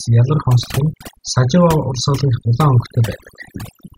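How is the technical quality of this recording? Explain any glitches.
The technical quality is compromised by overdone noise removal that runs through the whole speech clip. The noise reduction was set so aggressively that frequency bands near its noise estimate get pulled down or cut entirely, and quieter parts of the voice are cut with them. The background drops and breaks up into twinkling, warbling specks.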